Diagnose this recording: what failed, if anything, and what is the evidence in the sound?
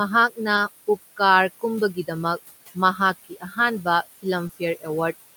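Noise suppressor artifacts, in call processing: throughout, the room noise is pushed about 15 dB down between phrases and swells back under speech. This is level pumping, not gaps.

Short concealed packet loss, at the network stage: brief smears at 0.55–0.59 s and 4.47–4.51 s. Each 20 ms hole was filled by extending the preceding sound, so it smears rather than going silent like a plain dropout.

Speech cut by the noise suppressor, in call processing: between 3.24 and 3.58 s, about a fifth of a second of soft speech falls by up to about 19 dB. It sounds swallowed along with the background rather than smeared.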